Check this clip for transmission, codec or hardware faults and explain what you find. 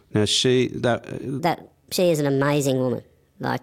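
A section at the wrong speed runs from 1.40 s to 3.62 s. It was likely caused by an editor or player running that part against the wrong clock, at 1.36 times the recorded rate. Pitch rises with tempo, by about five semitones, so the speech abruptly turns high and hurried.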